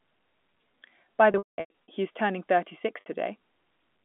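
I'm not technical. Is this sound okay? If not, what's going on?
No. There is packet loss with pitch repetition from 1.32 to 1.88 s, and again briefly at 3.00 s. Pieces of the sound went missing on the way, and the receiver filled each gap by repeating the last bit of voice. Around 1.3 s the gaps add up to about 0.38 s, the longest 0.2 s, so it briefly holds a buzzy note and fades toward silence. At 3.00 s the gap is only 0.06 s, a tiny held buzz. The telephone-style sound is normal.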